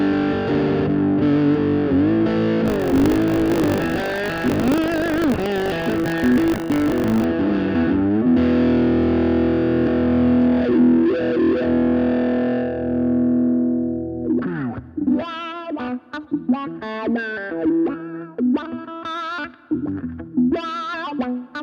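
The audio carries buffer tearing from 2.64 to 7.26 s: a 50 Hz robotic buzz, where roughly a tenth of each period replays audio about 40 ms stale.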